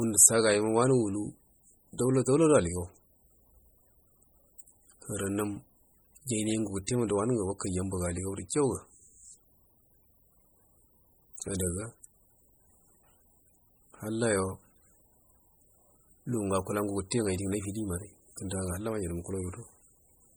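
Right from the start and all the way through, the speech has that watery, swirly quality, with consonants chirping metallically and edges smeared. That's the signature of heavy MP3 compression, likely at a starved bitrate. The damage points to something around 32 kbps. With so few bits, the encoder keeps dropping quiet frequency lines and bringing them back frame by frame, and that flickering is what makes the sound seem to churn.

At about 6.87 s, just before "wa nungu wakaija abaga", there's a quick pre-echo: roughly 16 ms of hiss sitting ahead of the attack, which lands soft instead of crisp. The codec spread its quantisation noise across the whole block, so noise meant to hide under the loud onset leaked into the quiet gap just before it.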